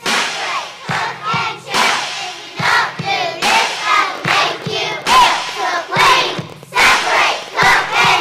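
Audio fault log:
3.94–8.05 s train of clicks: about fifty near-identical pulses tick over the sound at roughly 12.2 per second, spaced irregularly, with peaks about as loud as the audio itself. The likely cause is an external pulse source, such as interference from nearby equipment or a faulty connection or power supply. Because the clicks have much the same shape and the run continues for four seconds, it differs from random crackle, whose impulses vary in size and form, and from an isolated click.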